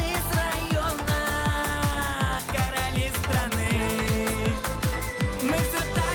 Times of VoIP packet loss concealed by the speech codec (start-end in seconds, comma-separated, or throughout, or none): none